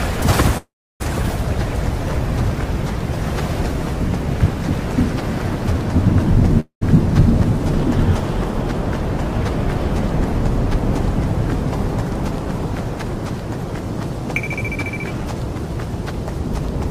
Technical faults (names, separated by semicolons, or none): call audio freeze